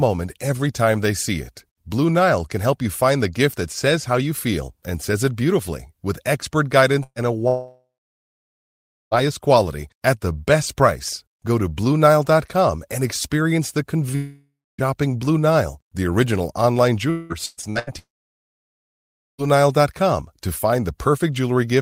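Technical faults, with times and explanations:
7.03–7.19 s, burst of packet loss: the last sound is briefly continued and fades, then goes silent for about 50 ms as roughly 120 ms is patched over and lost.
7.48–9.14 s, long network dropout: the last sound stretches on and fades, then about 1.25 s of silence, before resuming at "quality at the best". The cause is likely 1.64 s of audio never arriving.
14.15–14.81 s, long network dropout: a fading continuation of the last sound gives way to about 0.27 s of silence. The likely cause is roughly 640 ms of audio lost in transit.
17.10–17.90 s, repeated packet loss (robotic sound): just after "the original online", the sound turns choppy. Five gaps, the longest 193 ms, are patched one after another, covering over half the span.
17.99–19.41 s, long network dropout: a brief smear, then about 1.33 s of silence. The likely cause is 1.4 s of audio never reaching the receiver.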